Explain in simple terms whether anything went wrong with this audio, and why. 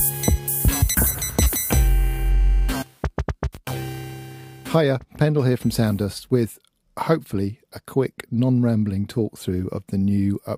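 From 0.68 to 2.84 s there's a GSM phone buzz: a harsh, raspy drone at about 217 Hz. A 2G phone nearby was in a call, pulsing its radio 217 times a second, and the recording gear picked up those pulses and turned them into sound.

Then, from 2.86 to 5.39 s, it changes to GSM signalling bursts, a fainter pattern of even ticks with a longer buzz twice a second. That's the same phone still in the call while its user wasn't talking, so it sent only occasional short groups of bursts.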